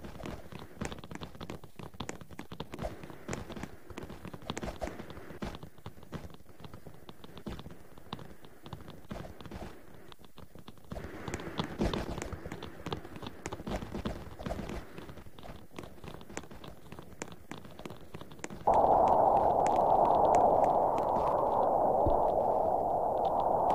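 No technical faults can be heard anywhere in the audio, and the signal stays intact and steady throughout.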